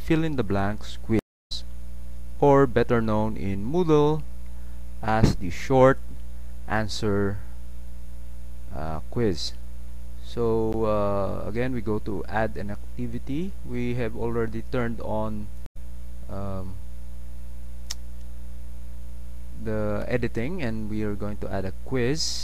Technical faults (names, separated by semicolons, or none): stream reconnect; block of digital silence